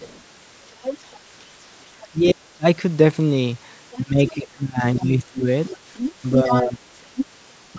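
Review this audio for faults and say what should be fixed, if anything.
A second voice runs under the speech from 0.00 to 2.04 s and again from 3.92 to 7.26 s, sitting about 10 dB below the main talker. This is the other side's voice leaking through, likely because the far end was played on a loudspeaker and the echo canceller left part of that loudspeaker sound in the microphone signal. Prevention: use a headset, or tune the echo canceller so it converges fully on the loudspeaker path.

The talker's level drops sharply while the other side is active, which is speech suppressed in double talk. The first drop runs from 2.11 to 2.65 s, roughly half a second, and goes down by about 40 dB. The longest stretch runs from 4.02 to 6.80 s, with about 1.5 s of the talker lost by around 20 dB. A final short dip of about 10 dB falls at 7.75 to 7.79 s. The likely cause is that the canceller could not tell the local talker from the echo and attenuated both. 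Prevention: use an echo canceller with reliable double-talk detection that keeps near-end speech at full level.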